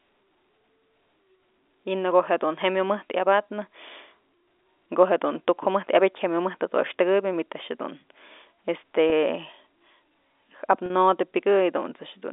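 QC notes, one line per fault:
9.10–9.12 s and 10.86–10.90 s: packet loss with pitch repetition. About 20 ms goes missing in the first gap and about 40 ms in the second, which fits one and then two consecutive lost 20 ms packets. The receiver fills each hole by repeating the last pitch period, so the sound briefly hangs on a slightly buzzy, held tone. The longer second gap shows more of that held buzz before the repeated cycle fades out over about 50 ms and a short cross-fade hands back to the live signal. The narrow 300–3600 Hz G.711 A-law telephone band carries through both gaps.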